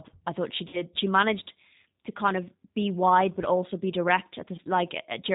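From start to finish the speech carries G.729 codec damage, and it is plainly audible. Nothing above 4 kHz survives, so the sound is dull and band-limited. Each 10 ms frame is rebuilt from a vocal tract filter, a pitch predictor and a few pulses. That leaves the voice rough and slightly synthetic. The character fits an 8 kbit/s G.729A stream.

At 0.68 s, right after "I thought she", there is VoIP packet loss concealed by the speech codec. About 50 ms of audio is missing, which points to five lost frames. The decoder fills the gap by stretching its last pitch and filter and lowering the gain, so the sound turns into a buzzy tone or coloured noise that fades. The damage lasts until 0.82 s, because each frame builds on the one before.

A second, shorter loss runs from 4.56 to 4.60 s. About 20 ms is gone, which fits two frames. It gives a brief stretched smear and a dip in level.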